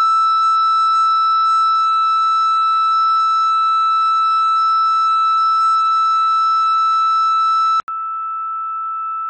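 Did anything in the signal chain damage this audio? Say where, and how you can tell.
Yes, at the capture end, where the input was likely switched to a poorer device. At 7.8 s the music drops out for about 80 ms, then comes back roughly 10 dB quieter, with nothing above 3.8 kHz and a new, fairly faint noise floor underneath. It stays like that to the end. That combination of a gap, a duller band-limited tone and a different level and hiss sounds like the system handing over to a narrower microphone or headset path mid-recording.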